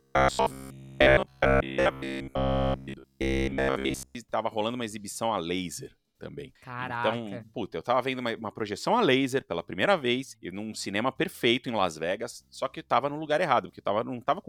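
From 0.02 s to 4.15 s the speech carries robotic sound from repeated short buffers: a rigid, metallic buzz at about 67 Hz. This is likely caused by short segments of roughly 15 ms being repeated while incoming audio arrives too rarely and gets skipped.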